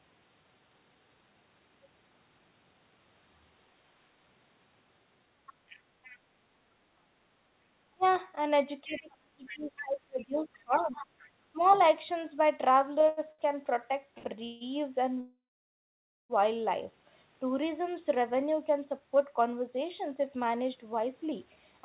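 At 5.47 to 6.18 s a second, faint voice sits under the talker. This is the other side's voice leaking through. It runs about 25 dB below the main speech. The likely cause is the far end playing on a loudspeaker, with the echo canceller leaving part of it in the microphone signal.

At 7.94 to 8.04 s the talker's speech is suppressed in double talk. For about a tenth of a second the level drops by roughly 30 dB. The echo canceller likely could not tell the talker from the loudspeaker echo while both were active, so it turned everything down. It sounds like a brief hole in the voice.

At 8.03 to 8.19 s the leak returns as a short scrap, about 35 dB down.

From 8.84 to 11.62 s both problems hit together and last longer. The talker is again pushed down, as far as about 30 dB, over about two seconds in total. The voice dips and breaks into pieces. Meanwhile, from 8.91 to 11.86 s, the other side leaks through at about 20 dB below the speech. 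This is the clearest stretch of echo in the clip, and the far voice competes with the chopped near one.

From 13.01 to 14.64 s come repeated stalls (stutter). Packets kept arriving late, so the jitter buffer ran dry five times. Each time the receiver stretched the last sound to fill the wait, 0.38 s in all, with the longest gap 0.16 s. That fill makes up about 23% of the stretch. Nothing is lost, but the speech drags and hiccups.

At 15.21 to 16.33 s there is a call audio freeze. Packets were likely held up in transit and the buffer emptied. The last sound carries on briefly as a fading buzz, then about 0.91 s of silence follows. Speech resumes where it stopped, so about 1.09 s of extra time has been added.

From 17.33 to 21.81 s there is a jitter buffer speed-up. The buffer had built up excess delay, so the receiver cut out many short pitch-period pieces, about 0.3 s in total. The speech plays at about 108% speed with the pitch unchanged. 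It sounds hurried. Throughout, nothing is heard above 4 kHz, which points to a narrowband telephone codec on the call path.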